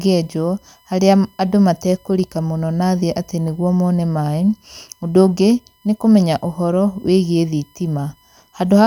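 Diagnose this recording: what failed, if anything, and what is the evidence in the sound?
USB whine runs under the speech for the whole clip: a steady fixed-pitch tone at 1 kHz, roughly 40 dB below the talker. It is a ground or power-path fault, where USB frame-rate current draw leaks into the analogue side. On a spectrogram it appears as one flat horizontal line at 1 kHz across every second.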